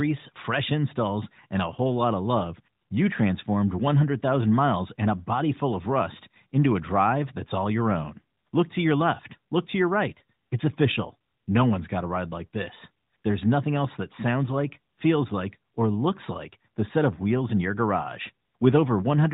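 Nothing's wrong in this speech clip; it's simply been carried over the AMR narrowband mobile codec, so it sits inside the usual phone band with nothing above 4 kHz, and its character fits the codec's top 12.2 kbps mode.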